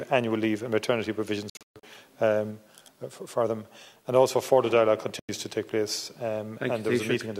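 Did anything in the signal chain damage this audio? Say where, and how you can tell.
Yes. The damage is at the playback stage, most likely a Bluetooth dropout on the wireless link. From 1.50 to 1.83 s the sound cuts out in several holes totalling about 260 ms, the longest about 130 ms. A single 93 ms gap follows at 5.19 to 5.29 s. Late packets were discarded and the output went silent, then resumed further along, as if it had kept playing. On a waveform these appear as flat gaps, and on a spectrogram as clean vertical blank bands.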